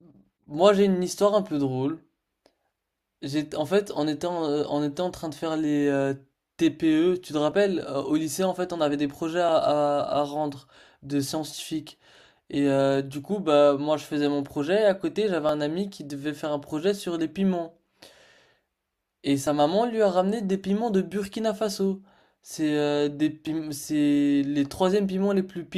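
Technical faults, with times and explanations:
3.52, 7.52, 9.49, 15.49, 19.47 and 23.47 s: overlap between stream segments. Each is a tiny click or skip in the speech. All six fall on boundaries of what sound like 2-second segments, where overlapping time stamps made the player trim 6 to 11 ms of audio that had not actually been duplicated. The waveform jumps abruptly at each splice, and a spectrogram shows a thin vertical broadband line there.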